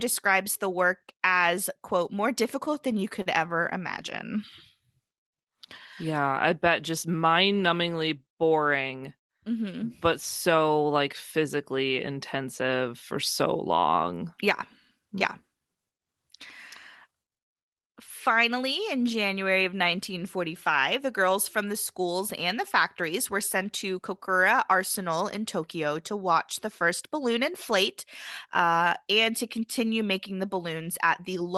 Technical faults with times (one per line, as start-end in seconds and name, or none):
2.65-3.28 repeated stalls (stutter)
17.71-18.60 jitter buffer speed-up
20.37-21.28 jitter buffer speed-up